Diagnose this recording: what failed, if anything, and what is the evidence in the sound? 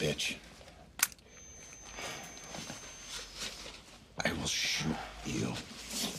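A feedback whistle sits in the acoustic path from about 1.24 to 3.36 s: a thin tone near 6.3 kHz, roughly 15 dB under the sound, swelling and fading slowly in level. That slow swelling, without growth, points away from an electrical tone and likely to a speaker-to-microphone loop held at the edge of feedback.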